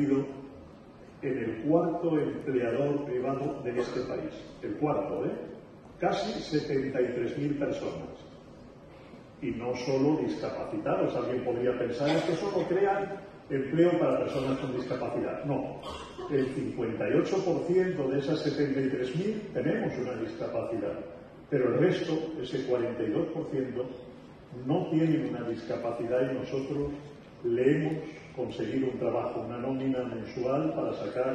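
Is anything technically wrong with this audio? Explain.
No, nothing in the signal points to a technical fault at any point.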